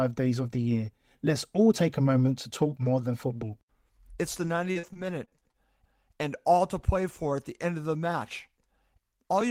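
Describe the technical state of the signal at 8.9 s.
At 8.9 s the signal is intact, with no audible fault at that point.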